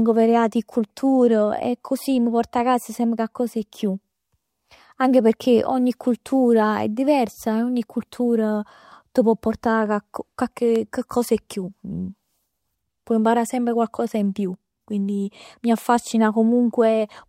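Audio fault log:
10.76–10.78 s, loud pop: a single sharp pop cuts in over the speech just before "coccos 'e", peaking a few decibels above the surrounding level, while the speech carries on underneath without a break. It lasts only about 20 ms, with no second click after it. The likely cause is a brief voltage pulse entering the signal chain, as from a switch, a plug, static discharge or a driver glitch.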